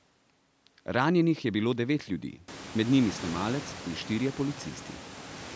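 No faults in this speech clip; the call's microphone processing leaves nothing above 8 kHz, and the room noise rises by about 24 dB around two and a half seconds in, settling about 18 dB below the speech.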